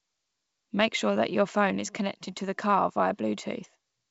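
No technical faults are present: the wideband telephone character, with at most a faint trace of coding in the upper band, fits G.722 wideband telephone coding working as intended at its full 64 kbit/s rate.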